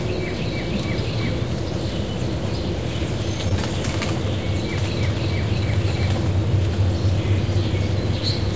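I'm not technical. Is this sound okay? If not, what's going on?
No, not quite. Around 3.49 to 3.54 s there's a short concealed packet loss. About 20 ms of the audio never arrived in time over the call connection, so the receiver patched the gap by stretching out what it had just heard, then blended back into the real sound. You'll notice it as a tiny smear or wobble there. Separately, the call route tops out at 8 kHz, so the very highest frequencies aren't there.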